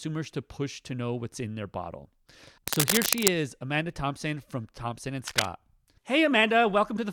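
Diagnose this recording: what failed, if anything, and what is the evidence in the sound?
Dense, ragged scratching, roughly as loud as the speech, covers 2.68 to 3.33 s, just after "what's in their bottle", and returns at 5.27 to 5.45 s. This is cable scratch noise in the analogue wiring, likely a worn connector whose contact resistance jumped as it moved.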